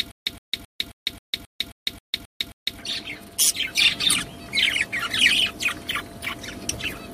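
Stutter with silent gaps, 0 to 2.79 s: a 114 ms burst repeats every 267 ms with silence between, likely a stalled stream replaying one fragment.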